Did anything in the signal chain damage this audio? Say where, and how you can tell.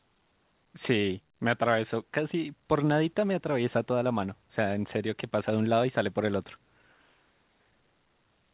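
No, nothing in the chain damaged this speech; it simply went through a call path, and with nothing above 4 kHz the band limit fits an ordinary G.711 A-law narrowband link doing its normal job.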